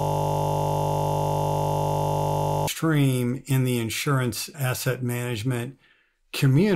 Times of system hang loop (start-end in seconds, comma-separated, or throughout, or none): 0.00-2.67